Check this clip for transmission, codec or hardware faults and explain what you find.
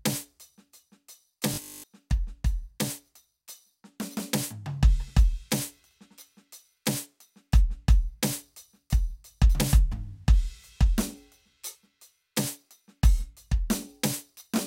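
One fault affects the music. From 1.54 to 1.86 s there is robotic sound from repeated short buffers: a 20 ms chunk, likely looped over most of that stretch, imposes a metallic 50 Hz buzz. It shows as identical repeating waveform cycles and evenly spaced 50 Hz harmonic stripes.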